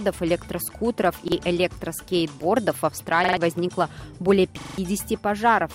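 At 1.28 s, 3.24 to 3.37 s and 4.61 to 4.78 s, a repeated buffer replays the same roughly 43 ms piece once, three times, then four times (which fits a 2048-sample buffer), making a stutter. The waveform shows identical blocks, and the spectrogram shows vertical lines at each hard join.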